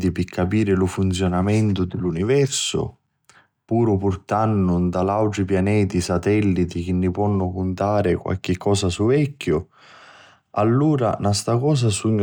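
No technical faults are audible.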